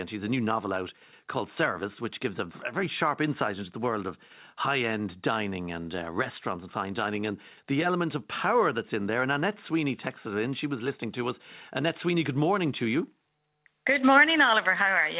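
No technical faults can be heard in this speech; the sound has the narrow bandwidth of a telephone-grade call path, with nothing above 4 kHz, which fits G.711 A-law coding at 64 kbps.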